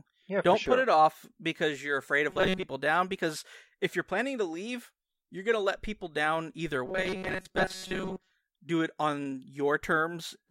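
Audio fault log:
2.30–2.64 s and 6.86–8.32 s, robotic sound from repeated short buffers: just after "off because you're afraid" and again after "let people down either", the speech becomes a stiff metallic buzz at 188 Hz. The likely cause is starved playback looping a roughly 5.3 ms buffer, so most of the stretch is repeats. A spectrogram shows rigid horizontal harmonics spaced 188 Hz apart, and the waveform shows an identical short cycle repeating.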